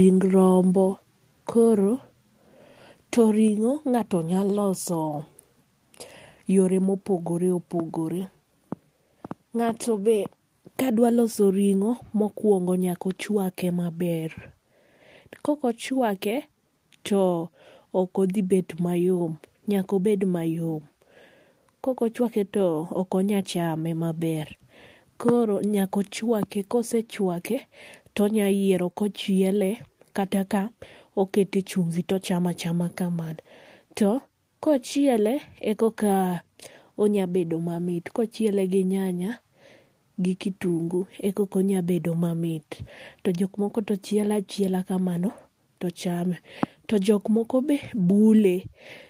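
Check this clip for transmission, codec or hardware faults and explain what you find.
One fault recurs in the speech: microphone volume stepped down, at 1.02, 3.48 and 6.84 s. Each time the input gain was likely cut automatically in a single step, so voice and background together drop abruptly by about 2, 2 and 1 dB.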